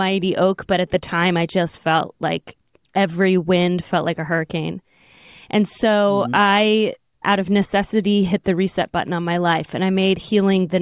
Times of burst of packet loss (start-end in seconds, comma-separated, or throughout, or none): none